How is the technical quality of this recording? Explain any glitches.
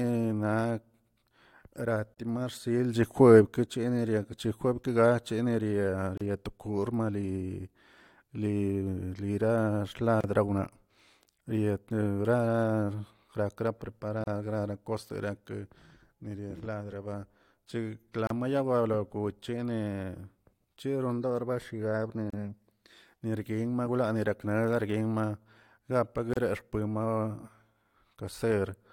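The speech is repeatedly interrupted by brief dropouts. At 2.14, 6.18, 10.21, 14.24, 18.27, 22.30 and 26.34 s, roughly every 4 s, a hole of about 32 ms (35 ms for the first) opens, with smeared edges, before the sound resumes where it stopped. These are gaps at joins of encoded pieces: separately encoded segments were joined without trimming their start delay and end padding.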